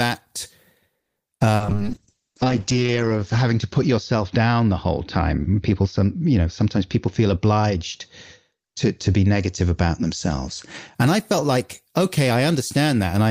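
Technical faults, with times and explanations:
0.99 to 1.19 s, call audio freeze: the speech stops for about 170 ms and the gap is filled by a continuation of the last sound that fades toward silence, likely because packets were held up and the jitter buffer ran dry. When delivery resumes the speech picks up exactly where it stopped, so nothing is lost, only delayed. That sets it apart from concealed loss: the hold is far longer and leaves no hole in what is said.
1.36 to 1.43 s and 1.56 to 1.63 s, short concealed packet loss: twice in quick succession about 40 ms of audio never arrived and was patched over. The receiver stretched the preceding sound, following its pitch where voiced or as shaped noise where not, then blended back in. Each comes across as a brief smear or wobble, and a short consonant in that slot can vanish. Unlike the freeze, this material is actually missing rather than postponed.
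1.65 to 11.01 s, call bitrate drop: the encoder was pushed from 32 kbps down to 7 kbps, staying at that floor for about 1.25 s, and its coded bandwidth shrank from 20 kHz to 8 kHz. Coarser coding makes the speech rough and watery, while the lost top end leaves it muffled and dull. This is a lasting change of tone over most of the clip, not a brief dropout, and it eases as the rate recovers.
6.65 to 7.76 s and 8.51 to 9.22 s, jitter buffer speed-up: the buffer was holding more audio than it aims for, so the receiver trimmed short pitch-period pieces over and over, running the speech at about 109 percent. Roughly a tenth of a second is dropped in the first stretch and somewhat less in the second. The speech sounds hurried while keeping its pitch, which separates it from a simple playback-rate change, and it overlaps the bitrate drop.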